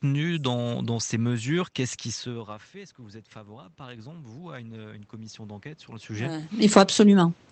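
From 2.24 to 7.03 s, automatic gain rising lifts voice and room noise together by about 10 dB after the talker moves away near 2 s, regaining only half the lost level. The waveform envelope widens steadily, and the whole spectrogram brightens slowly.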